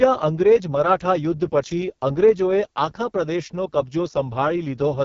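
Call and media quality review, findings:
AMR wideband (HD Voice) codec at what sounds like its lowest mode, around 6.6 kbit/s, whole clip: speech rough and raspy, pulse-model coding audibly strained, nothing above 7.5 kHz.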